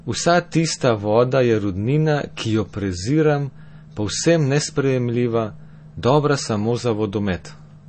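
Throughout, the speech sounds watery and swirly. A spectrogram shows a flat ceiling at 8.4 kHz with flickering gaps beneath, which is likely MP3 compression.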